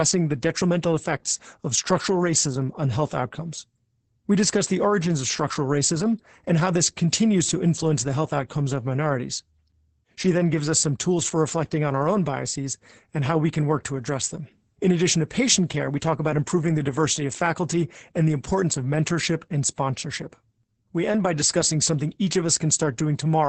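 Opus voice compression runs through the whole clip. Nothing reaches above 8.7 kHz, and the excitation is coded so coarsely that the speech sounds muffled, hoarse and slightly robotic. This fits SILK wideband coding at about 10 kbps in 20 ms frames.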